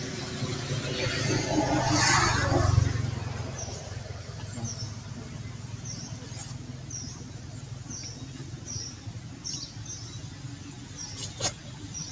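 Noise suppressor applied to music or sounds, throughout: a speech-tuned suppressor treats sustained tones and tails as noise, dipping them by about 5 dB, so the sound pumps while attacks pass through.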